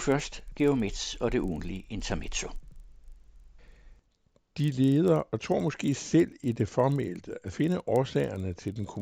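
Speech, with a resampler restarted on every block throughout. Each 40 ms block edge carries a small error, heard as a 25 Hz buzz under the speech.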